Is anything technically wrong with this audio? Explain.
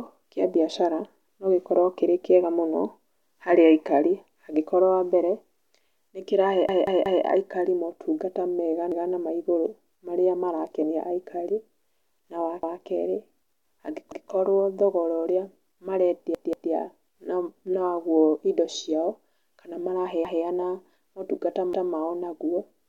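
Yes, this speech has a repeated buffer fault, seven times. The audio device ran dry and replayed its last block of about 0.19 s, which fits an 8192-sample buffer. You hear a hard-edged stutter. The block plays four times in all at 6.69 to 7.25 s, just before "aikari maũtungata mega na", and three times at 16.35 to 16.72 s. Single repeats land at 8.92, 12.63, 14.12 (before "thogora ũrĩa"), 20.25 and 21.73 s (before "mao naguo nĩ thogora"). Nothing gets skipped.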